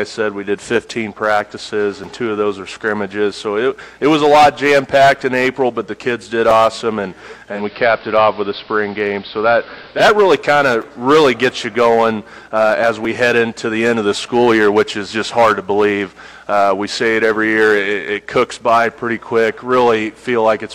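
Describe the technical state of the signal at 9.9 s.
At 9.9 s you're still in the digital radio blending to analogue stretch, 7.48 to 10.06 s. The receiver lost the digital stream and cross-faded over 192 ms to the AM broadcast, so the treble is duller and hiss sits about 25 dB down, with the level unchanged.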